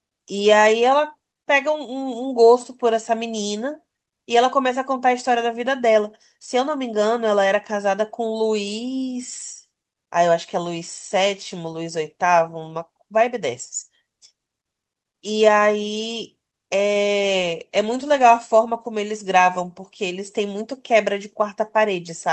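Nothing stood out on listening to this speech, which comes through a call connection with its top end reaching about 8 kHz.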